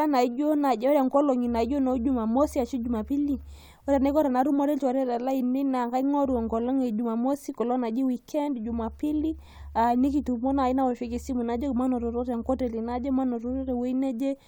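No technical faults can be heard anywhere in it.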